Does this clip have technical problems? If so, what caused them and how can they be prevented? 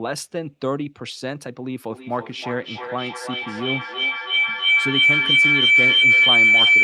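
Yes. From 1.9 s to the end, a feedback howl swells into a tone near 2 kHz, pulsing roughly three times a second and peaking about 11 dB above the speech. Two devices on one call in one room loop sound back, gaining level each trip. Muting one device or using headphones prevents it.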